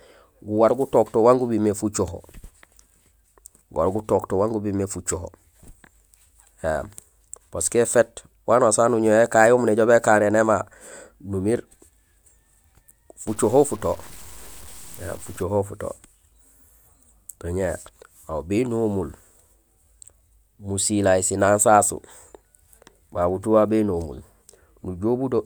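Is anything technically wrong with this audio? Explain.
Yes. From 13.28 to 15.43 s the speech turns grainy, likely from low bit depth without dither. Its roughness sits around 25 dB below the signal, fitting 7-bit truncation. Unlike steady dithered hiss, this grit follows the speech and sputters in quiet moments.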